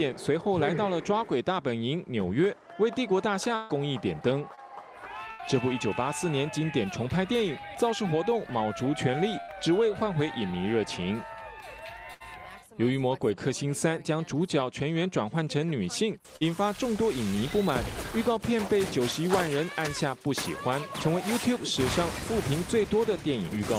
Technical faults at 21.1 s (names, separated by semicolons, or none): none